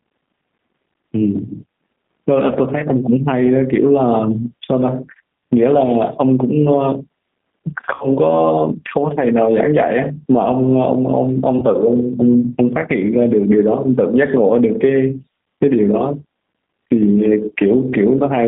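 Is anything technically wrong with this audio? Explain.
Yes. Gain pumping runs through the whole clip: the level swings by around 15 dB, which squashes loud and soft passages together. The likely cause is input gain set far too high, with a fast limiter clamping every peak.

The speech also passes through the G.729 codec at 8 kbit/s. It rebuilds each short frame from a vocal tract filter, a pitch predictor and a few pulses, so only about 150 Hz to 3.6 kHz survives, and the voice sounds plainly rough, thin and slightly synthetic.

VoIP packet loss, concealed by the speech codec, occurs twice: from 7.94 to 8.05 s, where 60 ms went missing, which fits two lost packets, and from 11.59 to 11.65 s, where 30 ms went missing, which fits one. The decoder extended its last pitch and filter, so the sound smears into a fading buzz or coloured noise and stays weak briefly afterwards.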